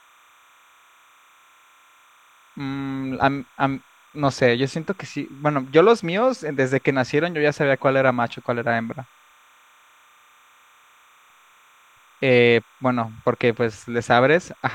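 Timecode bleed runs through the whole speech clip: linear timecode from an adjacent track or cable leaks in, adding a faint chirping warble near 1 and 2 kHz, well below the voice, around 35 dB down. Unlike a steady whine, it flips between two pitches with a 30-frame-per-second rhythm.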